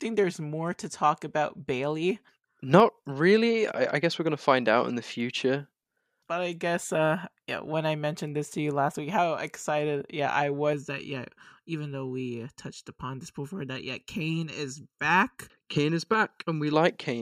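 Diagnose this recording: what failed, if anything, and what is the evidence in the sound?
From 10.73 s to 16.73 s the speech turns hollow and phasey. This is channel delay with comb filtering, at the driver or buffer stage. One channel arrives about 0.7 ms late before the mono sum. Shared content cancels at evenly spaced notches, starting near 700 Hz.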